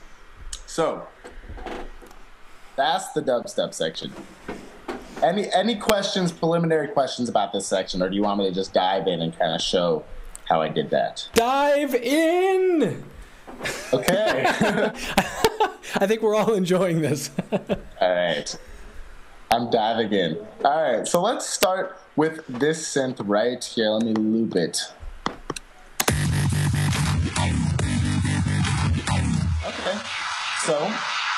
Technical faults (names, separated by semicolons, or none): integer overflow; adaptive stream at a lower bitrate